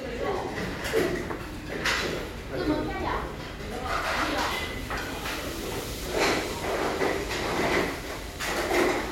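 Channel delay (comb filtering) runs from 6.06 to 7.79 s. One channel lags the other by about a single sample, and when the two are summed to mono, the first cancellation notch falls near 20 kHz. The very top end rolls off, leaving the sound slightly dull.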